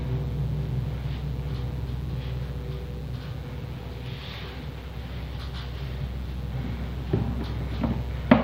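A recording of sounds carries mains buzz from start to finish: a steady, raspy 60 Hz hum sitting roughly 20 dB under the sound. A spectrogram shows evenly spaced horizontal lines at 60 Hz multiples climbing into the kilohertz range, and the waveform shows sharp spikes repeating 120 times per second, the signature of switching interference from a dimmer, rectifier or unshielded cable.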